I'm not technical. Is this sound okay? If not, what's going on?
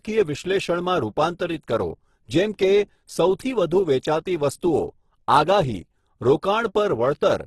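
No. Throughout, the speech sounds grainy and rough, with nothing above 12.2 kHz, likely from heavy Opus compression; unlike MP3 damage, it has less watery swirling.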